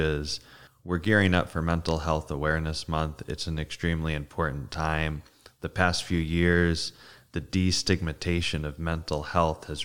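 No technical faults are audible.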